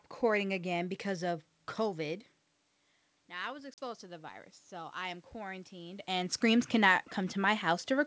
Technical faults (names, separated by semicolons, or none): automatic gain rising; packet loss on an ADPCM call